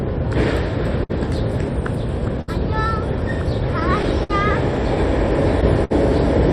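Clock drift between sender and receiver runs through these sounds: the sender's clock is a few percent slow, so the jitter buffer keeps draining and small timing hiccups recur. Short stalls from a late packet land at 1.03, 2.41, 4.23 and 5.84 s, each holding the last sound about 60 ms (63 ms at 2.41 s) with a faint buzz or dip before carrying on.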